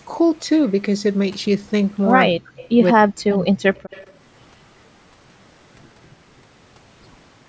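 Speech recorded through a call's microphone processing, band-limited with nothing above 8 kHz, shows two kinds of fault in a short span. Speech suppressed in double talk appears first from 2.3 to 2.58 s and again from 2.93 to 3.65 s. The talker's level falls away in pieces, with dips reaching about 40 dB, affecting roughly a third of a second in the first stretch and about half a second in the second. This is likely the echo canceller's response to both ends talking at once: unable to tell the near talker from loudspeaker echo, it attenuated everything. An echo leak follows each suppression, from 2.57 to 2.69 s and from 3.75 to 4.13 s, where a faint delayed copy of the sound arrives 185 ms behind the original at about 25 dB below the speech level. It is likely residual echo from a loudspeaker that the canceller failed to remove, passed back into the call.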